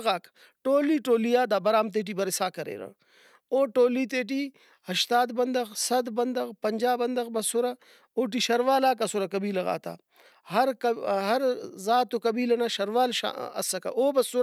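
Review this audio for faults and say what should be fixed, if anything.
Nothing needs fixing: the speech signal stays intact and continuous throughout, with no audible technical faults.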